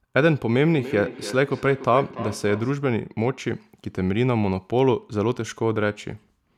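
Feedback echo between two devices runs from 0.72 to 2.87 s. A second device on the call plays this microphone's signal, which is picked up again, and neither echo canceller removes it. Speech returns roughly every 300 ms, peaking about 13 dB below the direct speech.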